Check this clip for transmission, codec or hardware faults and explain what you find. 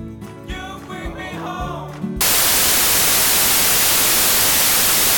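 One fault is present: samples built from the wrong bytes. It starts at 2.21 s and runs to the end. The reader combines each sample's bytes wrongly, so fast-changing low bits become the large part of each value. The result is loud, harsh broadband noise, close to white on loud passages.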